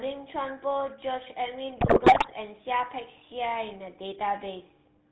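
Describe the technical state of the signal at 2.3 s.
At 2.3 s the signal sits near the end of a burst of GSM bit errors running from 1.78 to 2.33 s. Corrupted filter, pitch and gain parameters reached the decoder across most frames of that half-second, a damage density that points to a few percent of bits flipped on a weak link. Each bad frame warps the spectral envelope or throws the level off, so the speech breaks into squawks, pops and gargling. On a spectrogram this looks like blocky, frame-length smears and sudden bright bands. The waveform shows abrupt level jumps from frame to frame.

Underneath, the whole clip carries the GSM full-rate codec's plainly audible damage, consistent with the 13 kbps full-rate coder. Speech is rebuilt from a vocal-tract filter excited by regularly spaced pulses, with only a third of the excitation samples kept, which gives a buzzy, gravelly roughness. 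Nothing passes above 4 kHz, so a spectrogram shows a hard ceiling at 4 kHz with grainy, pulse-striated energy below it.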